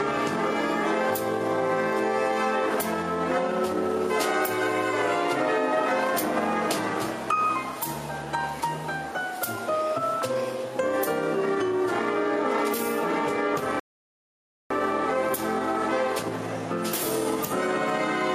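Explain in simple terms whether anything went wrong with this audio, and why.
Something did go wrong: a rebuffering stall. The player used up all the audio it had downloaded and had to stop and wait for more to arrive. You hear it at 13.80 seconds, when the sound suddenly drops to silence. About 0.91 seconds later, at 14.71, it picks up exactly where it left off. Nothing is skipped or lost. The clip just has almost a second of dead air added partway through.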